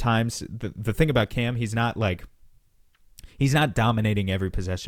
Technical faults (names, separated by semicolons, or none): none